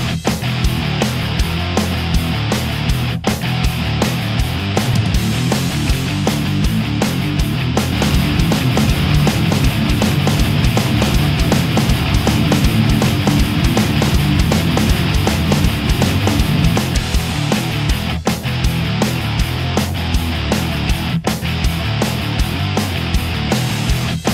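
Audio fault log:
7.92–16.78 s, doubled audio track: a full-band copy of the sound trails the original by about one second at roughly equal loudness, dry with no room decay, and starts and stops abruptly, likely from a second, slower capture path or a misaligned edit.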